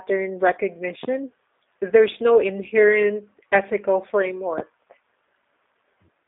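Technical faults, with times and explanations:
Throughout: G.729 codec. The speech has a band of roughly 300 Hz to 3.7 kHz, with nothing above 3.7 kHz, and a plainly audible rough, synthetic texture. This fits an 8 kbit/s G.729 stream, which rebuilds speech from a filter, a pitch predictor and sparse pulses rather than the original waveform.
1.03–1.07 s and 4.58–4.61 s: loud pop. Each is a single sharp pop, about 20 dB and about 15 dB above the speech, which continues underneath. The likely cause is a sudden voltage step or pulse, from a plug, switch, static or driver glitch, shaped briefly by the following circuitry.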